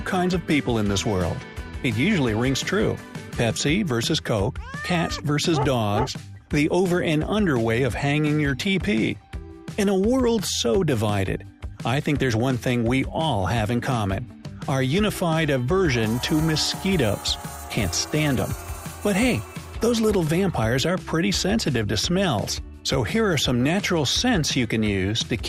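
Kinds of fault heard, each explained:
No kinds of fault are heard.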